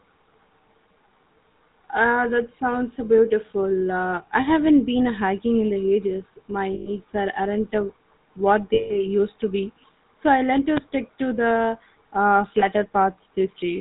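GSM full-rate codec damage runs through the whole speech clip: the vocal tract is modelled and driven by sparse regular pulses, nothing passes above 4 kHz, and the plainly audible buzzy, gravelly roughness fits the 13 kbps full-rate mode. Lost GSM frames then occur at 6.74–6.88 s, just before "are aren't uh what"; at 8.74–8.96 s, between "are aren't uh what" and "used to be so"; and at 12.60–12.64 s, after "stick to the uh". In each gap the last good frame is repeated, holding the sound as a rough metallic ring for 120, 160 and 20 ms.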